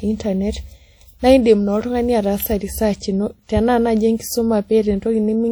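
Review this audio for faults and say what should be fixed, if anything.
A transform codec, likely WMA compression at a rate that fits about 48 kbps, is spreading quantisation noise across long blocks and zeroing weak spectral lines throughout the speech. The result is plainly audible ringing, a washy smear and hiss that breathes with the signal, even though content still reaches about 20.1 kHz. To prevent it, encode at a higher bitrate or use a better codec.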